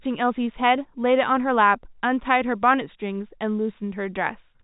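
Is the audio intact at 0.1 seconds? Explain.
Yes, the audio is intact at 0.1 seconds: nothing there is out of place, and the G.711 telephone coding simply leaves the speech band-limited with nothing above about 3.8 kHz.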